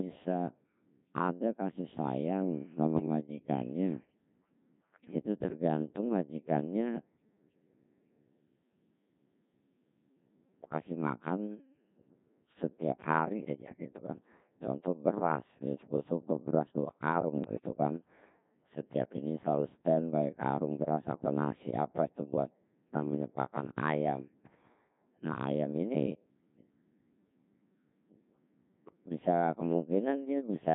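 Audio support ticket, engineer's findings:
Codec 2 vocoder, whole clip. Speech robotic and buzzy, heavily degraded. Cause: very low-rate vocoder, consistent with Codec 2 near 1.6 kbit/s. Only pitch, voicing, energy and spectral envelope sent. Decoder rebuilds the voice from sine waves. Original waveform lost.

Bit errors on digital voice radio, 2.96–3.06 s. Brief warble, pitch and level jump. Corrupted bits in what sounds like a single vocoder frame. Bit error rate of a few percent.

Same fault, 17.44–17.66 s. Longer burst of bleeps and garbled tone. Sounds like several consecutive frames hit. Each flipped bit skews pitch, voicing, level or spectrum for a whole frame.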